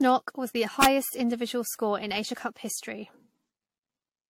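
Throughout, the speech sounds swirly, hollow and smeared, with blurred attacks and nothing above 16.5 kHz. That is more damage than a single 64 kbit/s AAC-LC pass would cause, so it is likely generation loss from roughly five re-encodes. From 0.82 to 0.85 s, between "knock was the" and "individual score in", an integer overflow pushes peaks about 1 dB past the limit. They wrap to the opposite sign and produce a violent crack that is far sharper than clipping's flattened buzz.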